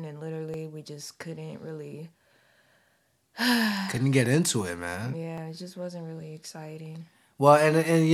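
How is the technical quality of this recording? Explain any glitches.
Two brief glitches mar the recording, both sharp clicks at 0.54 s and 5.38 s. Likely dropped samples: under a millisecond of audio went missing, so the waveform jumps abruptly, producing a single thin click.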